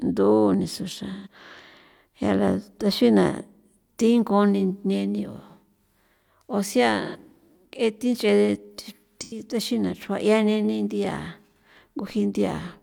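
Smeared, noisy patches interrupt the speech at 1.12–1.27 s, 7.05–7.16 s and 9.21–9.45 s, just before "taxina xrua'". This is AAC frame loss with concealment: the decoder filled each gap from the last good spectrum, and the gaps fit three, two and two lost frames.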